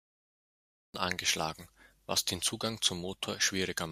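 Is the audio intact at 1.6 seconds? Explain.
Yes, the speech at 1.6 seconds is intact, with no dropout, click, distortion or other fault at that moment.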